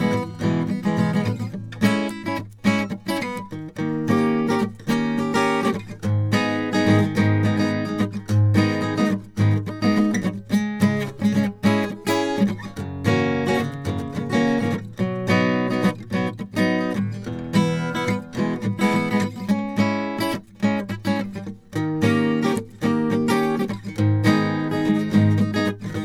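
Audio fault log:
No faults found in this music.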